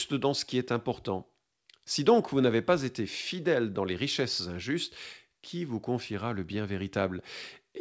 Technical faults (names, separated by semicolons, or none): none